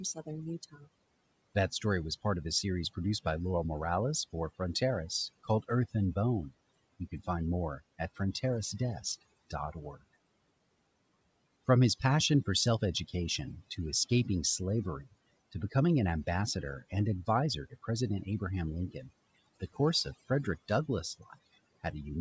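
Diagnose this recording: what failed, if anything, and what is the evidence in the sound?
The fault is overdone noise removal in the call processing stage, and it runs through the whole clip. The room noise sits about 28 dB below the speech. The suppressor is set too strong for that level. It pulls single frequency bands far down or off whenever they come near its noise estimate. Quiet parts of the speech fall into those bands and are removed with the noise. The leftover background breaks up into twinkling, warbling specks.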